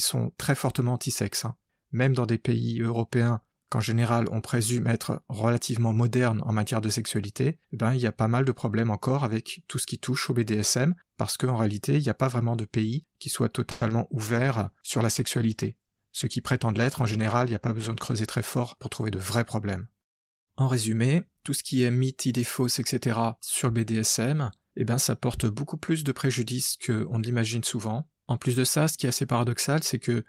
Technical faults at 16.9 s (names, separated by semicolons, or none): call bitrate drop; jitter buffer speed-up